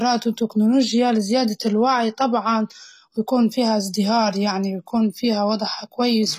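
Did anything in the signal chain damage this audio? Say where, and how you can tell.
Yes, at the codec stage: the speech sounds like it likely went through HE-AAC compression at a low rate, around 20 kbps. Throughout, the top end is resynthesised rather than kept, so s sounds turn gritty and metallic, and nothing reaches above 14.9 kHz.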